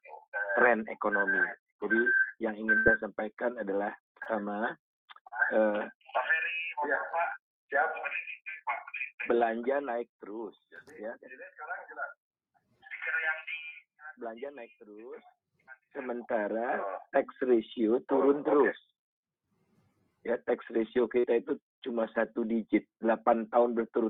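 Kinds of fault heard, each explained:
Burst of packet loss: Around 2.77 to 2.87 s, several consecutive packets never arrived in time to be played, leaving about 80 ms of audio with nothing to decode. The receiver filled the gap by extending the last sound it had and fading it down, so a held buzz or dying hiss replaces the real material. When the stream resumes, it picks up further along, with that stretch of sound gone.
Short concealed packet loss: Four brief dropouts, at about 4.23, 5.28, 14.46 and 21.20 s, each lost roughly 20 to 40 ms of audio before it reached the decoder. Each time the receiver papered over the hole by continuing the preceding sound, either following its pitch or as shaped noise, then crossfaded back into the real signal. The result is a quick smear or wobble, and a short sound caught in the gap can disappear.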